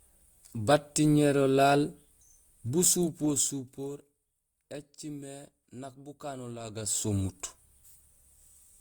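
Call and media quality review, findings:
Zipper noise, 2.65–4.16 s and 6.61–7.15 s. Gain applied in unsmoothed 2 dB steps: roughly 15 dB down at about five steps a second, then roughly 15 dB up at about fifteen a second. Each step ticks audibly on the speech.

Chunks out of order, 2.84–2.86 s, inside the first zipper ramp. A 10 ms chunk plays one chunk late, after the chunk that should follow it. This points to a jitter-buffer or write-ordering fault. It sounds like a brief jumbled blip, with three hard joins.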